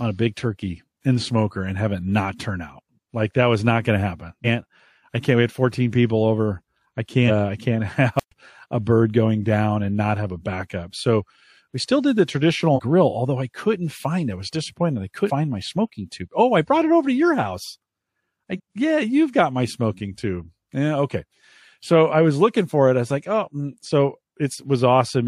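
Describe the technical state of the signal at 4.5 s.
Compressed frames skipped at 4.44 to 4.47 s: about five frames of roughly 46 ms each, around 200 ms of audio, never play, so the speech jumps ahead.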